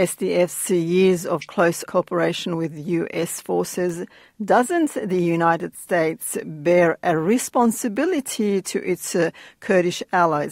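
Two sharp, isolated ticks cut through the audio at 3.90 s and 7.96 s, the first louder at about -18 dBFS, the second at about -30 dBFS. Each is a bit error spike: a flipped bit briefly throws the value off by a power of two, which fits one corrupted sample, then two adjacent ones.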